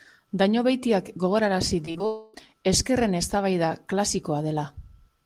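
From 1.85 to 2.38 s the speech breaks up with repeated packet loss, giving a choppy, robotic sound. Four short holes, the longest about 36 ms and about 80 ms in all, are each patched by repeating the last bit of sound. On a spectrogram these show as brief smeared or frozen slices where the harmonics stop moving, and the waveform shows small repeated cycles in place of the natural shape.

Inside that stretch, from 2.06 to 2.35 s, the speech is replaced by a sustained, buzzy continuation of the preceding sound lasting about 0.28 s, with no silence before the speech returns. The likely cause is a long network dropout: about 280 ms of audio never arrived and the receiver stretched out what it had. A spectrogram would show flat, unchanging horizontal bands across the gap, and the waveform would show a looped, regular pattern instead of evolving speech.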